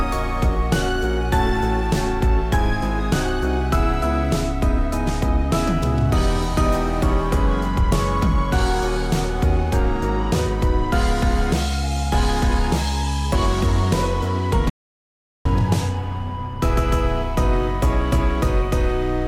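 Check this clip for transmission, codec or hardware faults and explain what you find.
There's one fault here, an audio dropout to silence running from 14.70 s to 15.45 s. The sound cuts off abruptly and picks up again mid-flow, with roughly three quarters of a second of silence in between and no room tone at all. That dead-flat gap points to the input being lost, likely a momentary disconnect or mute, while the recorder kept writing silence. Whatever was happening during that stretch is simply gone.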